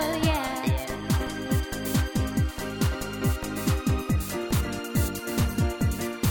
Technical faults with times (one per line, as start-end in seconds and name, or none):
none